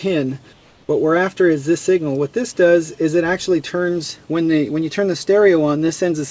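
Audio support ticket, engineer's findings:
Comfort noise in place of the background, 0.53–0.89 s (360 ms). The background, about 34 dB under the loud parts, turns smoother and about 2 dB quieter, then the real background returns. The likely cause is the sender's activity detector pausing transmission, with the receiver filling the gap with synthetic shaped noise. Not a noise gate or dropout: sound never goes silent, only its texture and level shift. The band stops near 8 kHz, which fits a G.722 call codec.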